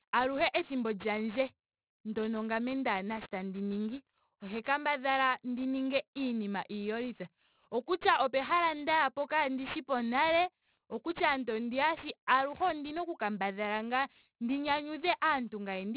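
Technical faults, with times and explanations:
Throughout: aliasing. The speech was resampled to a low rate without filtering first, which fits a drop to 8 kHz. Energy above 4 kHz folds back below it as false tones, roughly 20 dB under the speech. Sibilants turn gritty and metallic.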